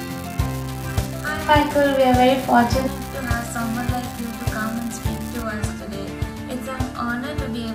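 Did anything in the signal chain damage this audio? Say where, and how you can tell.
Yes. An unreliable data bit in the converter's digital interface damages the sound from the start to 5.42 s. One marginal data line flips its bit in a random share of samples, and each flip adds a fixed-size spike of about -18 dBFS. The result is a steady crackle that continues through the pauses. On the waveform, equal-height spikes are scattered through the sound. A spectrogram shows broadband speckle, which stops abruptly at 5.42 s.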